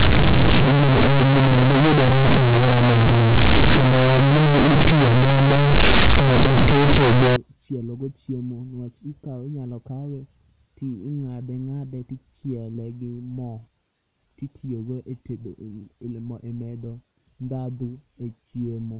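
From 0.0 to 7.36 s, companded audio read as linear: mu-law bytes are played as raw 8-bit samples, so quiet sound swings as wide as loud. It is buzzy and noisy in pauses, a dense slab on the waveform and smeared broadband on a spectrogram, until "chielo go chiemo".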